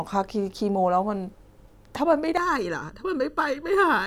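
From 2.37 s to the end, the speech takes on channel delay (comb filtering): one channel arrives under a millisecond late, and summing to mono cancels shared content at evenly spaced frequencies, the first notch near 700 Hz. The result sounds hollow and phasey.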